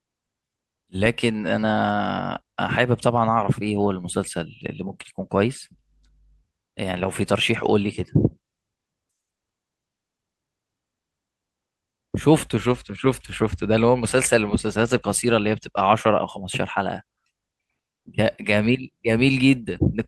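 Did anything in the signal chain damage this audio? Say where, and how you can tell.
No, nothing in the signal chain damaged this audio.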